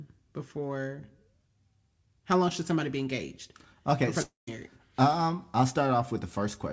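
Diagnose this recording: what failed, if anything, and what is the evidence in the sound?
The network stage failed here, with what sounds like a long network dropout from about 4.22 to 4.49 s. Right at 4.22 s the speech turns into a smeared buzz that fades away, then there's roughly 140 ms of near silence before the audio picks up again further along. That's the receiver stretching the last sound it got across about a quarter of a second, and it likely covers packets that never arrived. Around 260 ms of speech is just gone. The G.722 call path's limit of nothing above 8 kHz runs through the whole clip.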